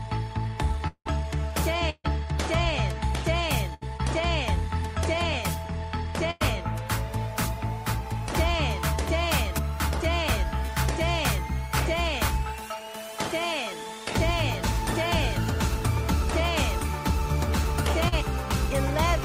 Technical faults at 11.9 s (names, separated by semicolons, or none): none